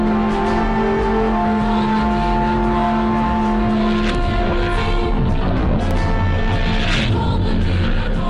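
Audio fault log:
5.91 s, block of digital silence: A tiny stretch of the sound drops to silence and returns at once. The gap lasts about 0.73 ms, short enough to fit a 32-sample block. It is too brief to hear as a hole. Instead it comes across as a tick or dip. The tick comes from the edges. The waveform drops straight to near silence and back with no fade, and those two abrupt steps spread energy across the spectrum.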